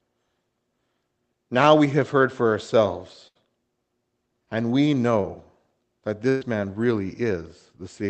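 Speech carried over a call link, with its top end stopping near 8 kHz as an Opus-coded stream would, suffers two bursts of packet loss: at 3.27 to 3.37 s, just after "have heard for ourselves", and at 6.29 to 6.43 s, just before "man really". The receiver stretched the last sound into a decaying buzz or hiss lasting about 80 ms and 120 ms, then jumped ahead with that stretch of speech gone. A spectrogram shows smeared, fading harmonics, and the waveform a shrinking envelope with an abrupt restart. A short concealed packet loss follows "and we" at 5.21 to 5.25 s. About 20 ms was filled by extrapolating the preceding sound and crossfading back, giving a brief smear that appears as a slight blur in the spectral detail and a small kink in the waveform.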